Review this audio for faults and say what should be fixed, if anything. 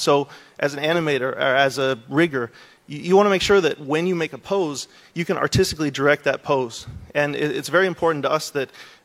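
No technical faults can be heard anywhere in this audio. Nothing needs to be fixed.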